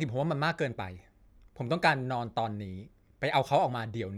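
No technical faults are audible.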